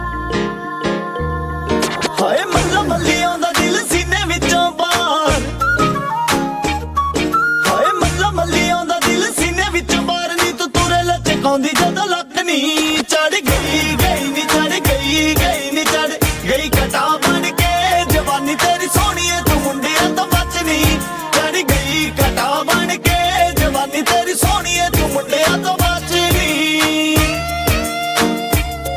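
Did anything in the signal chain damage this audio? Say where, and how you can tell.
No, nothing in the signal chain audibly damaged this audio, and no stage from the wiring through to playback leaves a fault anyone could point to.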